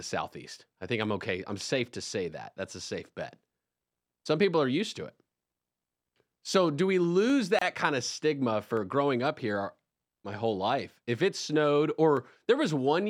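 Sharp single clicks sit in the speech at 1.03 s, 7.30 s just after "do we", 8.77 s, 10.33 s and 12.17 s just after "it snowed". Each is most likely dropped samples: a fraction of a millisecond of the stream is missing, so the waveform leaps to a later value. Nothing audible is lost; only the instantaneous step is heard, a thin vertical line across the spectrum rather than any break in the sound.

Between 7.59 and 7.62 s, right before "kind of stigma", the speech breaks off for about 27 ms and then resumes exactly where it left off. This is a gap at a join of encoded pieces. Two separately encoded segments were butted together with the encoder's start-up delay and final-frame padding left in, and that silence now sits mid-phrase with smeared edges. Unlike the clicks, this is a real hole in the sound that you can hear as a brief dropout, not just a tick.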